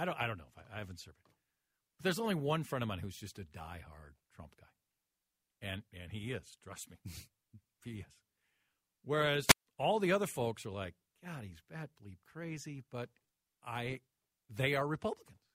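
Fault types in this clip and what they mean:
Wireless microphone squelch dropout: the radio link from the analogue FM transmitter weakened until the receiver's squelch circuit judged the carrier too poor and shut off its output. In this speech clip that happens between 9.46 and 9.66 s, where a short surge of hiss and static gives way to a 144 ms hole of near silence before the signal recovers and speech continues.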